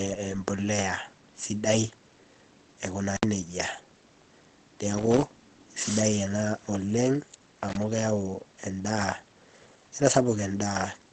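A low-rate codec stage, likely Opus compression, runs from start to finish. The encoder appears to have dropped into its speech-oriented mode with a wideband limit, which fits a bitrate around 16 kbps, so nothing reaches above about 8.7 kHz. The result is plainly audible codec damage: the speech sounds muffled and hoarse, with the airy top end missing and a rough texture over the whole clip.

From 7.69 to 7.83 s a loose connector crackle cuts in. A worn or dirty contact somewhere in the signal path is making and breaking contact in quick succession, chopping the signal on and off. For that short stretch of roughly a seventh of a second, the audio turns into an irregular, scratchy burst of crackle laid over the speech before the line settles again.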